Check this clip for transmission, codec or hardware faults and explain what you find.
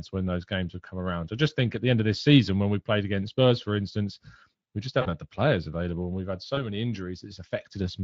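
There's one kind of fault here, VoIP packet loss concealed by the speech codec, at 5.01–5.13 s and around 6.55–6.59 s. The decoder patched each gap, which fits two lost 20 ms frames and then one, by stretching the last pitch and filter while fading the gain, so the sound briefly goes buzzy or noisy and thin. The underlying Speex coding adds only a light roughness.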